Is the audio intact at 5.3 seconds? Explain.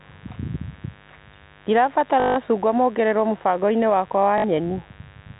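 No. At 5.3 seconds the speech carries a mains buzz, which runs through the whole clip. Sharp switching spikes, twice per cycle of the 50 Hz mains, are leaking into the signal path and spreading harmonics well up the spectrum. The result is a steady, raspy buzz sitting roughly 30 dB below the speech, heard within the telephone band of the G.711 coding, which cuts everything above 4 kHz.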